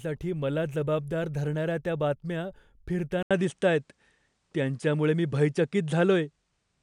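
At 3.23 s the speech drops out for 80 ms, then returns duller, with nothing above 10.5 kHz, a level shift of roughly 5 dB and a faint new noise floor. This is likely an input switched to a poorer device, persisting to the end.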